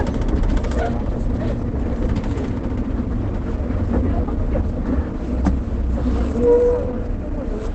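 Opus compression runs through the whole of this everyday-sound recording. Nothing survives above about 8.6 kHz, and the audio sounds muffled and hoarse, likely from Opus falling back to its wideband speech (SILK) mode at a very low rate, which fits roughly 12 kbps.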